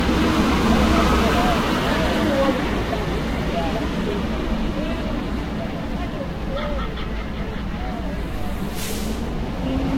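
Throughout, generation loss: swirly, hollow, smeared sound with blurred attacks and nothing above 16.6 kHz, likely from about seven lossy re-encodes, worse than one encode alone.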